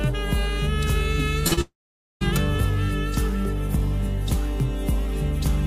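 From 0.14 s to the end, faint regular ticks recur roughly every 70 ms. These are clock slip clicks, likely from two unsynchronised clocks drifting a few hundred parts per million apart.

At 1.47 s and again at 1.53 s there are brief smears. This is short concealed packet loss: each time about 40 ms never arrived and was filled by extending the preceding sound.

From 1.61 s to 2.23 s a fading buzz or hiss gives way to silence for about half a second before the audio resumes. This long network dropout likely lost about 600 ms outright.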